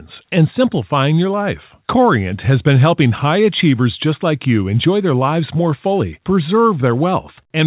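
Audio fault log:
No faults can be heard in the speech, which arrives over a WebRTC call path using the G.711 A-law codec at 64 kbps, so the audio carries nothing above 4 kHz.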